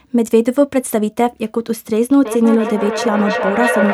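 Feedback echo between two devices runs from 2.25 s to the end of this speech clip, returning roughly every third of a second at up to about -4 dB below the speech. One device is replaying another's microphone in the same room, and neither device's echo canceller removes the other's playback.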